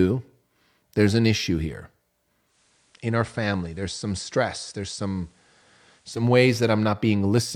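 A speech recording in which, just after "there's an issue here", at 2.44 s, the audio shows a digital radio blending to analogue event. The receiver lost its digital stream and cross-faded over about 148 ms to the station's FM broadcast. From there until 6.26 s, the level drops by about 4 dB, and FM hiss sits roughly 35 dB below the signal. At 6.26 s the receiver returns to the cleaner digital path.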